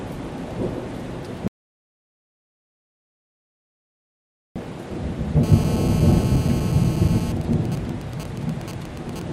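From 1.48 s to 4.56 s the audio drops out to silence for about 3.1 s. The waveform goes flat with no room tone, and the spectrogram shows a blank band, most likely from the input being lost while recording continued. From 5.43 s to 7.32 s a GSM phone buzz appears, a hard, raspy tone at 217 Hz about 13 dB below the signal. It comes from a nearby 2G phone in a call whose radio bursts the audio circuit rectifies, and the spectrogram shows evenly stacked horizontal harmonic lines. From 7.41 s to 9.22 s this becomes GSM signalling bursts, even ticks with a longer 217 Hz buzz twice a second, roughly 15 dB down, as the phone's user falls silent. On the waveform these are clustered spikes, and on the spectrogram they are short vertical stripes.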